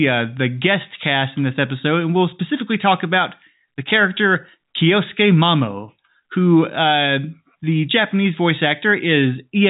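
Speech heard through a G.711 A-law telephone path with nothing above 3.8 kHz, as that coding dictates, and no faults found.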